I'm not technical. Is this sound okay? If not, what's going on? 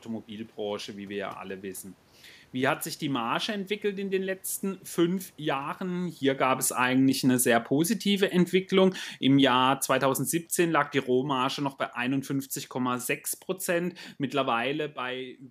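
No, not quite. From about 4.97 to 13.06 seconds there's automatic gain falling: the recorder decided the sound was too loud or its background noise too strong and slowly turned itself down, so the voice and the room noise behind it sink together. The volume change near 6 seconds is just the talker moving.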